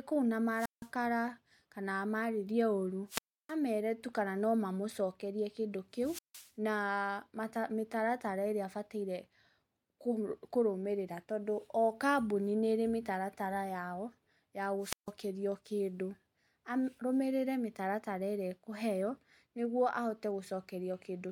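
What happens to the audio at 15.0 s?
A burst of hiss, then roughly 150 ms of near silence from 14.80 to 15.12 s: a wireless microphone squelch dropout, where the fading radio signal made the receiver mute.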